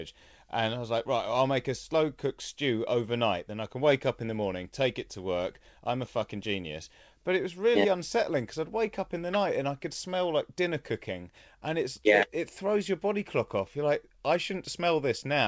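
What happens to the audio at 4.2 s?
Nothing goes wrong at 4.2 s: the speech carries on intact through the call path, with no dropout, glitch or distortion at that point.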